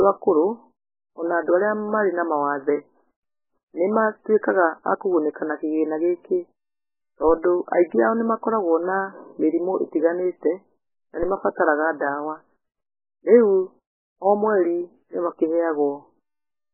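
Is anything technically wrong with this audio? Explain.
Yes, two faults are present. Throughout, the speech is heavily damaged and nothing appears above 3 kHz. This is likely MP3 compression, starved at a bitrate that fits roughly 8 kbps. The encoder drops the treble and switches weak frequency lines on and off between frames, so the speech sounds watery and swirly. A spectrogram shows a flat ceiling at 3 kHz with patchy, flickering blocks beneath it.

At 11.23 s there is a DC step: the waveform's zero line suddenly jumps. The offset then drains away through a 5 Hz high-pass, heard as a single low thump while the speech carries on. On the waveform, the trace lurches off centre and slowly sags back.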